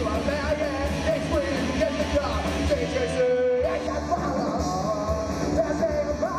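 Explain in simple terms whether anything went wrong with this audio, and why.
Something does go wrong from 3.87 s to the end: channel delay, or comb filtering. One channel runs a fraction of a millisecond behind the other, and when the two are combined into one, parts of the sound they share cancel out. The first gap falls around 3 kHz, with more at evenly spaced higher points, so the last stretch sounds hollow and phasey, losing some crispness.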